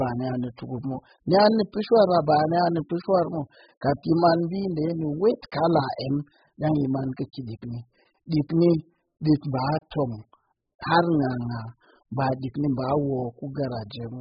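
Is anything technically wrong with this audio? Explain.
Yes, the whole clip carries heavy AAC compression damage, most likely from an AAC-LC encode at a very low bitrate, something around 8 kbps judging by how much is missing. Nothing survives above 5 kHz, so the speech sounds dull. At that rate the encoder can't afford many bits per frame, so it cuts the top of the spectrum and coarsely quantises what remains, leaving a smeared, warbly texture on vowels and a fizzy edge on sibilants.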